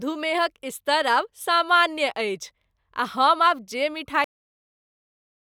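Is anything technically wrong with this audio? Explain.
Yes. There is a cut-off end at 4.24 s, right after "आब जे": the final buffers never reached the output, so the speech halts mid-sound and drops straight to digital silence for the remaining 1.3 s. The waveform ends abruptly at a flat line, and the spectrogram shows energy ending in a vertical edge with no decay.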